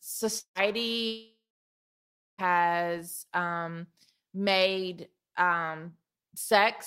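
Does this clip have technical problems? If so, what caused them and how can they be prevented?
Yes. At 0.39 to 0.58 s and 1.07 to 2.41 s the speech smears into a fading buzz, then silence, returning with about 0.16 s and 1.32 s missing: a long network dropout, likely packet loss the receiver papered over. A steadier connection with forward error correction prevents it.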